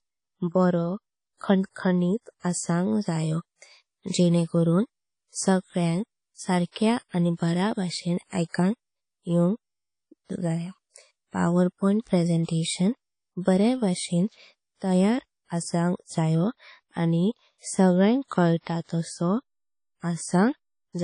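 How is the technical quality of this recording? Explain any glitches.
The recording has clearly audible lossy-codec damage throughout, most likely WMA compression. The audio stops dead at 10.1 kHz, and below that the speech carries a ringing, washy smear with hiss that swells and fades with each phrase. The encoder's long transform blocks spread quantisation noise over tens of milliseconds, and weak spectral lines are dropped, which fits a low bitrate around 32 kbps. A plain low-pass filter would remove the top without that breathing hiss and smearing.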